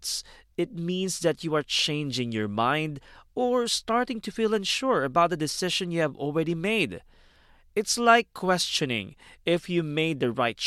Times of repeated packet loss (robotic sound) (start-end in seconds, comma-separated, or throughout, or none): none